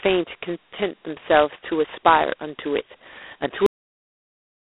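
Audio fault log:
throughout: G.726 ADPCM. The speech carries a harsh, rasping hiss that rises and falls with its level, the sign of an adaptive predictor coding each sample's difference with too few bits. Damage is heavy, which fits the 16 kbit/s mode, where only 2 bits a sample remain and quantisation noise climbs steeply. The band sits at the telephone range of roughly 300 Hz to 3.5 kHz, and nothing above 3.8 kHz comes through.
3.66 s: cut-off end. The speech stops mid-sound and falls straight to digital silence with no decay, and that silence holds to the end of the clip. This is the signature of final buffers that were never written or played out. The audio before the cut was captured, but the tail after it is simply missing rather than faded, so the sound ends on an abrupt edge instead of a natural release.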